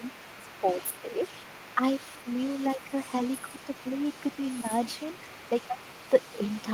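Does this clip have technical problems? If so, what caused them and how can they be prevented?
Yes. The other side's voice leaking through is faintly audible throughout. It is likely loudspeaker echo that the echo canceller missed. A headset prevents it.

Speech suppressed in double talk dips the voice at 0.36–0.78 s (deeply), 1.02–1.23, 1.75–1.81 and 2.75–2.93 s. The canceller likely ducked both sides. Better double-talk detection prevents this.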